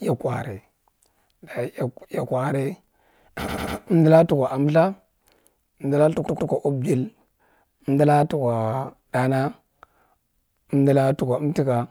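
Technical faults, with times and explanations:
3.47–3.76 s and 6.25–6.49 s, repeated frames: a 96 ms block plays three extra times, then a 120 ms block twice more, adding 288 ms and 240 ms. Each stutter repeats the same fraction of a second. The waveform shows identical copied segments.
7.08–8.95 s, drift correction step: speed rises about 5.5% and pitch about 92 cents, nearly a semitone. The likely cause is clock-matching software adjusting playback rate in one jump. On the spectrogram, the harmonics step upward.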